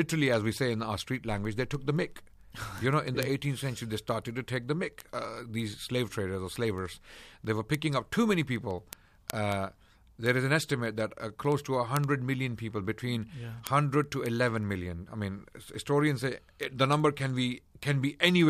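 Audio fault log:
0.12–18.48 s, word clock ticks: a steady patter of sharp little ticks runs under the speech, roughly every 70 ms, so a few hundred of them across the clip, some louder than others. That's a digital link being read by a device on its own free-running clock, not locked to the sender. The two clocks drift apart by something like 300 ppm, and each time they slip past each other a single sample gets dropped or repeated, which you hear as a tick.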